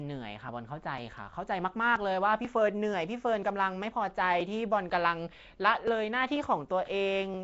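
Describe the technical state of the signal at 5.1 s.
At 5.1 s you're hearing the rough, hissy, underwater sound of what's likely Nellymoser compression. It's coding short blocks on a tight bit budget, consistent with about 32 kbps, filling starved bands with noise and leaving nothing above 7.7 kHz.

That moment also sits inside a run of periodic USB or driver dropouts from 0.49 s to 7.34 s. Every 0.49 s something stalls the audio path and around 10 ms is simply skipped, so you get a steady, metronome-like tick through the speech.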